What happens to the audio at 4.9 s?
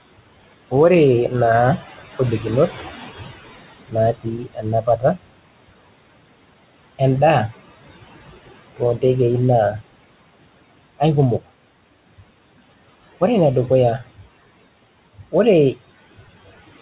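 Speech cut by the noise suppressor runs from 4.13 to 5.27 s, with well over half a second of it turned down. The suppressor mistakes quiet parts of the speech for background and lowers them with it, by up to about 21 dB, so soft consonants and endings sound swallowed or faint. The same moment also carries noise suppressor artifacts: the suppressor lowers the noise by about 20 dB frame by frame, so the noise sinks between the words and rises under them.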